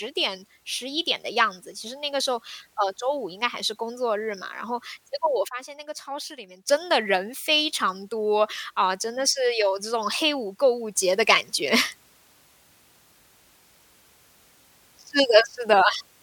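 At 5.48 s the speech and its background noise drop together by about 12 dB, returning at 6.69 s; at 10.96 s both rise by about 6 dB and stay there to the end. Each sudden gain jump likely comes from a gain setting applied instantly, without a ramp.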